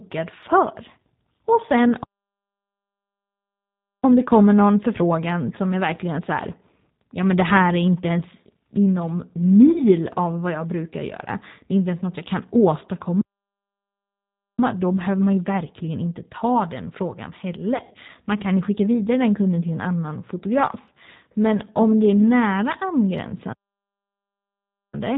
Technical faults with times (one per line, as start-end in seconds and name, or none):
0.00-25.18 G.729 codec
9.72-9.81 VoIP packet loss concealed by the speech codec
17.77-17.97 VoIP packet loss concealed by the speech codec